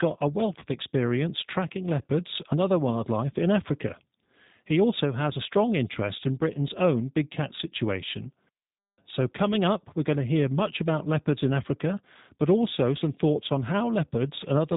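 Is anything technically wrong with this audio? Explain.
Yes, two things. The whole clip has the G.729 codec sound, which fits an 8 kbit/s stream. It rebuilds the speech from a vocal-tract filter, a pitch predictor and a handful of pulses per frame, so nothing above 4 kHz comes through and the speech sounds plainly rough and synthetic.

There's also VoIP packet loss concealed by the speech codec, at 0.60 to 0.63 s and again at 2.90 to 2.97 s. Each gap fits a single lost 20 ms packet. The decoder stretched its last pitch and filter with fading gain, so you hear a brief smear that fades, and the speech stays weak just afterwards.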